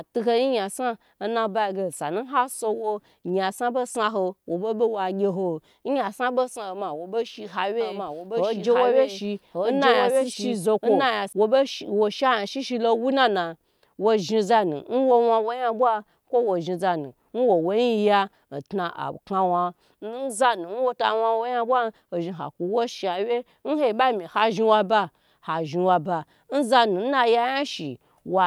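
From 7.81 s to 11.33 s the speech is doubled. A doubled audio track is heard. A second full-band copy runs about a second behind the original, at roughly the same level. It carries no decay or room colour, so it is not an echo. It starts and stops abruptly at those times. The likely cause is the same signal being captured twice, once through a slower path, or an edit leaving two copies out of step.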